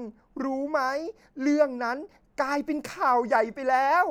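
No technical faults are audible anywhere in this speech recording.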